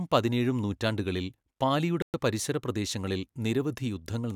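A speech clip in which the audio drops abruptly to silence at 2.02 s and stays dead for 117 ms, resuming at 2.14 s just before "പരിസര പ്രദേശങ്ങളിൽ". The gap has no fade and nothing bleeds through it. This is likely a Bluetooth stall: interference delayed packets on the wireless link, the headphones' playback buffer emptied, and output halted until retransmitted packets arrived.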